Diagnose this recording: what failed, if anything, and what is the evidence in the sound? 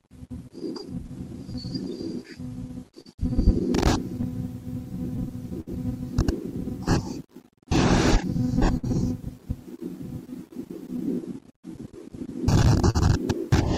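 Clock drift between sender and receiver runs through the whole recording. The stage is the network jitter buffer. The sender's clock runs slow, by roughly four percent. The receiver's buffer keeps draining as a result. Small timing hiccups recur throughout at uneven intervals. The receiver has to keep stretching and patching to stay in step.

Scattered short gaps appear in three stretches. From 0.59 to 3.07 s there are around seven, the longest about 40 ms. From 4.21 to 5.69 s there are about three, the longest near 70 ms. From 7.25 to 8.85 s there are about three more, again up to about 70 ms. The receiver continued the last sound over late packets. No audio is missing.

Repeated timing corrections run from 1.90 to 12.71 s. Playback here proceeds at 99 percent speed. The receiver inserts short repeated pieces, all in the same direction, to wait for the slower sender. In total they add about a tenth of a second. 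The edits are unevenly spaced. They come across as slight hiccups and a faintly unsteady tempo rather than distinct clicks.

Repeated stalls, a stutter, occur between 10.97 and 11.57 s. There are three gaps, filling 55 ms in total, the longest 40 ms. Packets arrived more slowly than they were played. The jitter buffer ran dry again and again. Each time the last sound was held until data returned. Nothing is lost, but this passage drags and stutters audibly.

A short stall from a late packet follows at 12.90 to 12.97 s. One packet was not there on time, and the buffer emptied. The receiver stretched the preceding sound by 44 ms. It then resumed from the same point. The delay grew by the same 44 ms. The sound is held slightly too long, with a slight buzz or dip. No content is missing.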